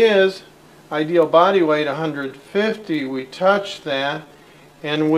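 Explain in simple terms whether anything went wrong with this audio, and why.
From 2.18 s to the end, the audio suddenly plays at about 70% of its speed, a time-stretched section. It drags, likely because software lengthened it by repeating tiny pieces. Unlike a slowed tape, the pitch doesn't drop.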